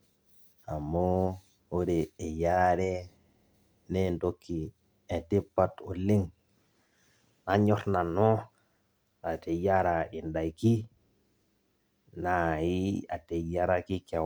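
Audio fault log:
No fault is heard in this audio.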